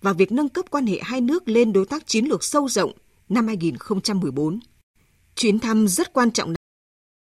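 At 6.56 s there's a cut-off end: the speech stops mid-sound and drops straight to digital silence with no decay, because the final buffers never got written.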